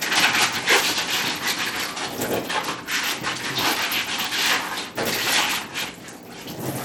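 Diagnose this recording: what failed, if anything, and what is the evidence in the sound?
Codec stage: gritty, coarse treble throughout with nothing above 18.5 kHz, likely Bluetooth SBC compression starving the upper sub-bands, which fits a bitrate near 96 kbps.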